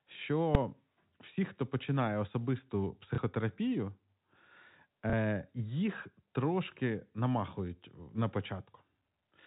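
Invalid numbers at full scale strike this speech recording at 0.55 s. A calculation produced infinite or invalid values that clipped to the maximum sample value for a block of about 2.9 ms, which fits a 128-sample block. At that length the onset and release pops merge into one loud bang. Packet loss with last packet repeated occurs at 3.15 to 3.18 s and again at 5.10 to 5.13 s. Each time, 30 ms of audio went missing and the receiver refilled the gap by replaying the previous packet, which is heard as a small blip. Throughout, the G.711 A-law telephone coding limits the sound to below 4 kHz.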